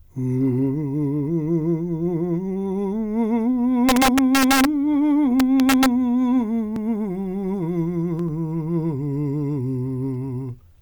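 A gain stage pushed the music about 3 dB past its integer limit from 3.89 to 4.65 s, and about 1 dB past it from 5.40 to 5.86 s. The integer overflow wraps peaks to the opposite sign, producing violent cracks far harsher than clipping.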